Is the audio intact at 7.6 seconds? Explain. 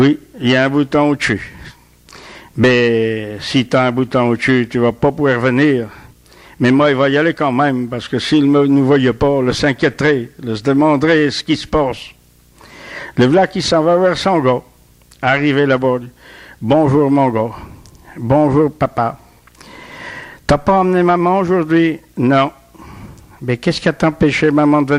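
No. At 7.6 seconds, as across the whole clip, video or display buzz sits roughly 35 dB below the sound. A screen or video cable is coupling into the audio path, leaving a 60 Hz field-rate buzz with gritty hash above it, harsher than smooth mains hum.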